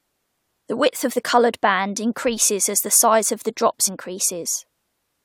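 At about 1.10 s there's a tiny blip in the speech, and a second one runs from about 3.87 to 3.89 s. Both are damaged data in a compressed stream: part of the encoded file got corrupted, so the decoder misreads the frame there, loses its place and has to hunt for the next valid frame header before carrying on. Each one is a short glitch, about 20 ms long.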